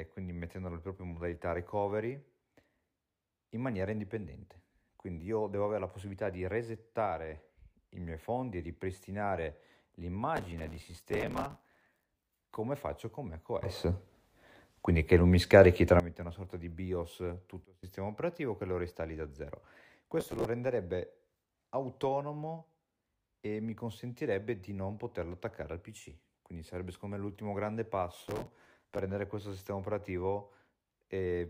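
From 10.36 to 12.03 s, just before "come faccio con", processor overload crackle tears through the speech. Many roughly 5 ms buffers miss their deadline, each replaced by a scrap of old audio with hard edges. This is a dense grit, not a single dropout. It returns briefly at 20.20–20.45 s, after "lo ristalli da zero", and again at 28.18–28.98 s.

At 13.63 s, after "come faccio con", speech and background noise leap together by about 15 dB. They stay there until 16.00 s, just before "una sorta di". At 17.65–17.83 s they drop together by about 24 dB. Each step is instant, with no fade, so these are sudden gain jumps, likely from a gain change applied without a ramp. That sets them apart from compression pumping.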